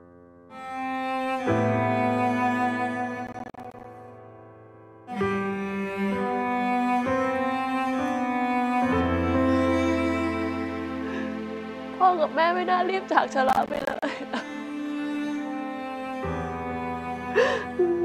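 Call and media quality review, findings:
Processor overload crackle, 3.27–3.84 s and 13.49–14.03 s. Gritty tearing bursts riding on the sound, each about half a second. CPU missing consecutive buffer deadlines, each miss dropping roughly 10 ms to silence with hard edges; clears when load drops.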